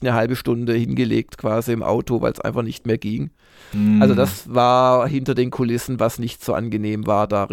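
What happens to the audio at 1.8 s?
Nothing goes wrong at 1.8 s; the speech there plays through intact, with no dropout, click, distortion or other fault.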